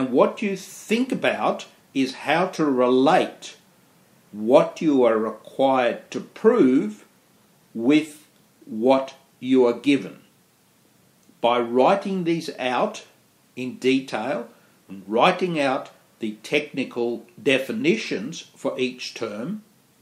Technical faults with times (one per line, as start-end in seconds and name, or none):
none